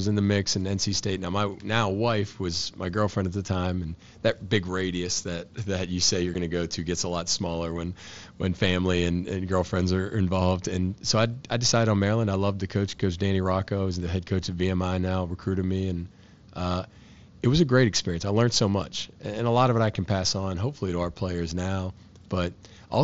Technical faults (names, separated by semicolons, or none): unconcealed Bluetooth headset packet loss